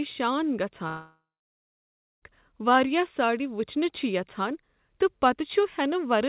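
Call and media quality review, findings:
Long network dropout, 0.88–2.24 s. About 1.34 s of audio gone. Last sound smeared into a fading buzz or hiss, then roughly 1 s of silence. Resumes at "واریاہ ساڑِ" with the gap not recovered. Likely packet loss, masked by jitter-buffer concealment.

Call path: G.711 mu-law at 64 kbps. No content above 4 kHz, giving narrowband tone. Codec coding noise present.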